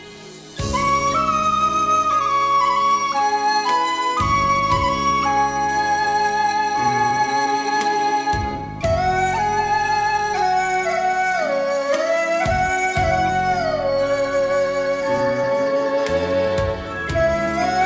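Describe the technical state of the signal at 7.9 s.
At 7.9 s the signal is intact, with no dropout, glitch or distortion, only the steady band limit at 8 kHz that a wideband call codec such as G.722 would impose.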